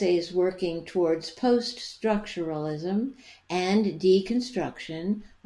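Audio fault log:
No faults detected in this speech recording; nothing to log.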